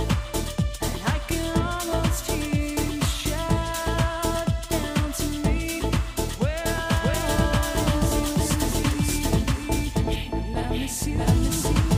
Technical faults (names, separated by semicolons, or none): doubled audio track